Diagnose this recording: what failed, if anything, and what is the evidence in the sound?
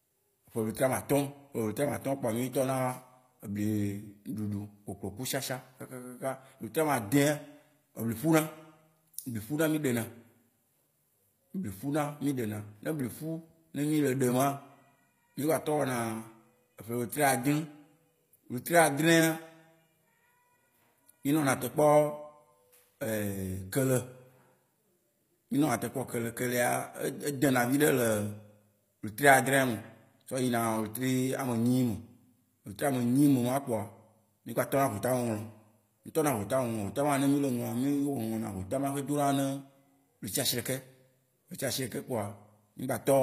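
The failure is at the codec stage, throughout the speech. S sounds are gritty and lispy, and nothing reaches above 15.5 kHz. This is likely HE-AAC compression, fitting about 24 kbps. The treble is rebuilt from copied lower bands, so its harmonics misalign.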